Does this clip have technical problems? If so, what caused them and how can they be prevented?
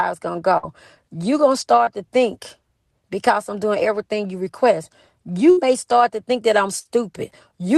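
Yes. A burst of packet loss occurs three times: 0.57 to 0.65 s, 5.51 to 5.59 s after "doing everything you request", and 6.79 to 6.87 s after "to think that I'm". Several packets arrived too late or not at all. The receiver stretched the last sound for about 60 ms, fading it into a held buzz or hiss. The audio then jumps ahead, with about 60 ms missing. To prevent it, use a steadier network path and a larger jitter buffer, or enable forward error correction in the codec.

Short concealed packet loss occurs once, from 1.85 to 1.89 s, just before "to think because I'm". About 20 ms of audio never reached the decoder in time. The receiver filled the hole by continuing the previous sound, then blended back into the real signal. It is heard as a brief smear. To prevent it, reduce jitter on the link and give the receive buffer more headroom.

The call path runs through Opus, with the audio band ending near 12 kHz, which fits a bitrate of about 24 kbps.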